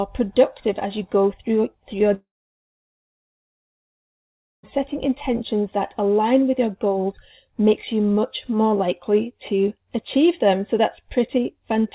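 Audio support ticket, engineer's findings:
Audio gap 2.14 to 4.65 s. Last sound stretched into a brief fading buzz, then near-silence for about 2.4 s. Resumes without the lost 2.5 s. Likely a long network dropout, with the jitter buffer concealing, then muting. Band-limited to 4 kHz via G.711 mu-law.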